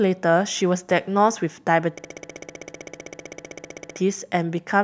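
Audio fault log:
1.98–3.97 s, system hang loop: one identical 64 ms slice of speech repeats 31 times at 15.6 Hz, a machine-gun stutter from hardware replaying a frozen ring buffer, which fits a 1024-sample buffer. Unlike a dropout, it never falls silent.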